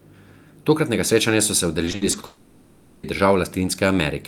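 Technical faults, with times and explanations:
1.85–2.25 s, repeated packet loss (robotic sound): right after "srečanja so se", repeated short gaps, the longest 60 ms, are patched by repeating the preceding sound, making the audio choppy with pieces missing.
2.25–3.05 s, long network dropout: a likely interruption of incoming audio is masked for about 0.8 s by synthetic continuation of earlier sound, heard as a fading buzz or hiss with no true audio.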